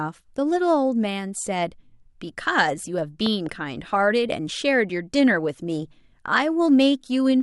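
At 3.26 s a loud pop breaks in: two sharp thumps ending by 3.49 s, roughly 10 dB above the speech. A voltage pulse from a plug, switch or static is the likely source. Unlike a dropout, the speech continues underneath, unbroken.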